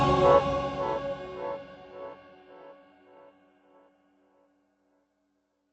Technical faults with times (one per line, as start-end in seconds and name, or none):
none